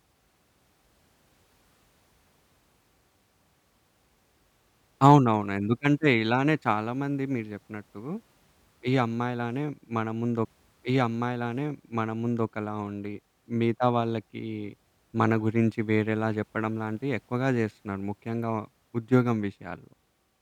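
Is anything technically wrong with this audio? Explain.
Yes. At 10.45 s the stream repeats a segment: the player fetched or queued the same chunk of the stream twice, so after reaching 12.46 s it jumps back and plays about 2.0 s of the speech over again. The listener hears a small blip at the point where playback lurches backwards, then a stretch of speech that has already been heard, which adds roughly two seconds to the running time.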